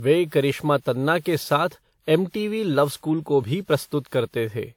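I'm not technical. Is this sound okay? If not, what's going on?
No. From start to finish, the speech sounds swirly, hollow and smeared, with the starts of sounds softened. This is generation loss, likely from the audio being compressed and decompressed about seven times over, with each pass adding fresh damage on top of the last.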